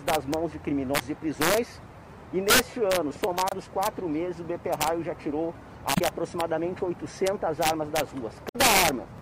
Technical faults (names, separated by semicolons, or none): integer overflow; damaged data in a compressed stream